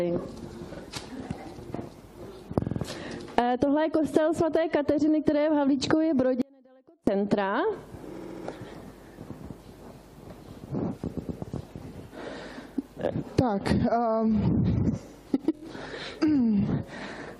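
At 0.73 s a 46 ms block plays twice. This is repeated frames. A run of coded frames was delivered more than once, so the decoder replays it. Each replay adds time. At 2.64 s a 46 ms block sounds three extra times, a stutter. At 8.16 s a 70 ms block repeats four times. At 11.16 s a 116 ms block returns twice. At 15.55 s a 23 ms block repeats three times.

From 6.42 s to 7.07 s there is an audio dropout to a faint residue. The sound cuts out abruptly for about 0.66 s. Only a faint trace remains, roughly 30 dB below its normal level. It then snaps back mid-flow. This is not a pause or a fade. The likely cause is a break in the wanted signal while the path after it stayed live.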